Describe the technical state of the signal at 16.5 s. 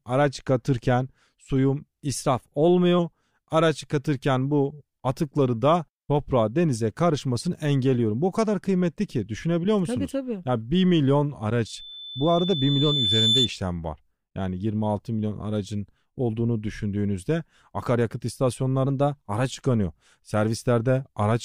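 No technical fault is audible at 16.5 s; the speech signal is intact at that point.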